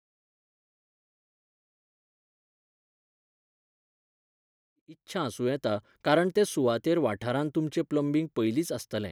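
No technical faults are audible.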